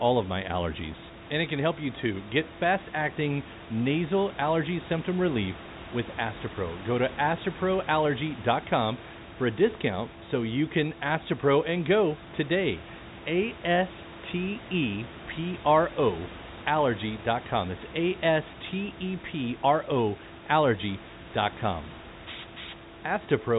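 No technical faults can be heard anywhere in this speech.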